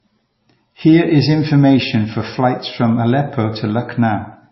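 Throughout, the speech sounds dull and smeared, with nothing above 5.7 kHz. This is likely low-bitrate audio saved at a high bitrate: the re-encode cannot restore lost detail.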